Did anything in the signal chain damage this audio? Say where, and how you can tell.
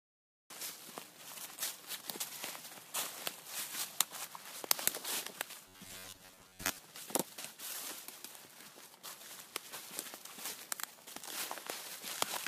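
Yes. Silence runs until 0.50 s, then sound begins mid-event with no attack. This cut-off start means capture or recording began late.

From 5.68 to 6.80 s there is a rigid 93.8 Hz buzz. This robotic sound is likely a buffer stage repeating 10.7 ms chunks, skipping most real audio.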